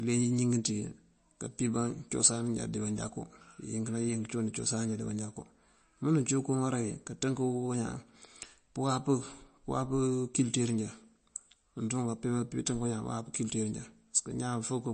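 From start to finish the speech has a plainly audible watery, swirling quality, with chirpy, metallic s sounds, smeared attacks, and nothing above 8.4 kHz. The likely cause is MP3 compression at a low bitrate, roughly what a 34 kbps encode would give. Short of bits, the encoder drops weaker frequency lines, which then flicker in and out between frames to create the swirl, and it cuts off the top of the spectrum at a fixed point.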